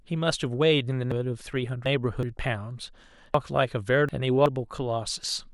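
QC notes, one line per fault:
1.12–2.23 s: chunks out of order. A block of about 0.37 s arrived late and plays two blocks behind where it belongs, so the sound in this span is jumbled. Nothing is missing, but there are three hard joins between mismatched blocks.
3.34–4.46 s: chunks out of order. The same displacement recurs with 0.37 s blocks. One block lands two places late, which scrambles the sequence and leaves three abrupt joins.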